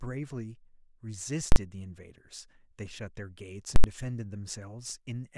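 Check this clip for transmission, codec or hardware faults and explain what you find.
The speech carries two bursts of invalid numbers at full scale, at 1.52 to 1.56 s and at 3.76 to 3.84 s. A calculation produced infinite or invalid values, which were clamped to the largest positive or negative sample, so the output sat flat at one extreme value, far beyond the speech peaks, for 40 ms and then 80 ms. Each block is heard as a very loud pop at its start and end with no sound between, or as a single bang where the block is short.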